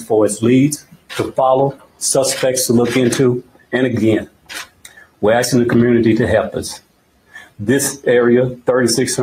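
From the start, a noise suppressor designed for speech is processing this non-speech audio. It treats steady and decaying material as noise and turns it down, swinging the level by around 15 dB. Attacks pass, while held sound and tails sink.

Sound cut by the noise suppressor occurs at 0.79–1.12 s, 1.73–2.01 s, 3.42–3.73 s, 4.25–5.23 s and 6.78–7.6 s, each dropping by about 18 dB at its deepest. The first three are brief dips; the last two stretch to roughly a second and 0.8 s.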